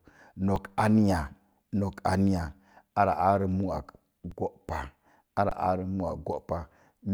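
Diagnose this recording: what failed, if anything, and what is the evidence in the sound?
Three brief freezes at 0.56 s, 4.30 s and 5.49 to 5.52 s: the speech flatlines for about 3, 11 and 21 ms, then resumes. This is an underrun with held sample. The output buffer ran dry, the converter held its last value, and roughly that much audio was lost. The 11 and 21 ms gaps fit 512- and 1024-sample buffers.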